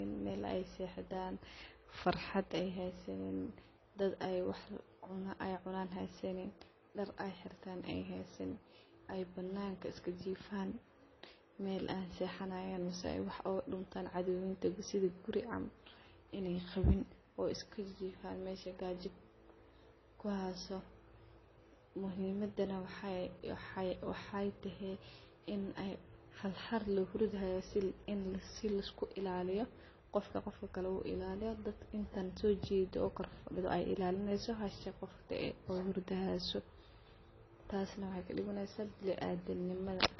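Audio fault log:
throughout: transcoding between lossy codecs. The speech is cut hard at 5.9 kHz, with the artefacts of both codecs heard together, likely from low-bitrate MP3 re-encoded to AAC-LC, fitting about 24 kbit/s each. A spectrogram shows a flat ceiling and blotchy, fragmented upper bands.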